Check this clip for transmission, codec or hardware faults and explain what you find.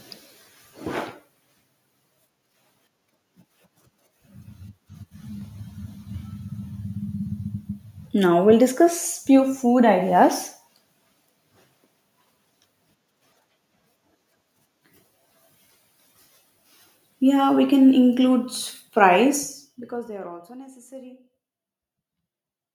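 One fault turns up, zipper noise, from 19.2 to 20.6 s. The speech gets pulled down by roughly 25 dB in 1 dB jumps, about thirty a second, with no smoothing between them. Each jump leaves a tiny click, so the fade comes with a fast ticking zip riding on the speech.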